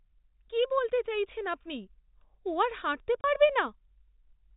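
It's a short speech clip carried over G.711 telephone coding. Just after "ও আর হাঁটতে", at 3.21 s, a 30 ms hole of packet loss filled with silence appears, which points to one dropped packet.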